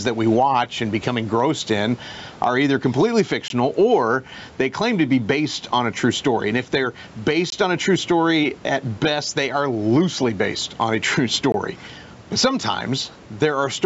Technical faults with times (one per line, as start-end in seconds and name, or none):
0.00-13.85 gain pumping
3.48-3.50 gap between chunks
7.50-7.52 gap between chunks
11.52 gap between chunks